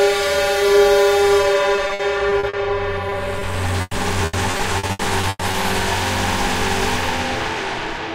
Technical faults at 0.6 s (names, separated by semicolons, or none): none